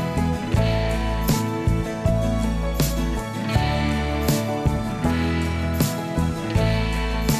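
No technical faults can be heard anywhere in this audio. Nothing at any point needs to be flagged.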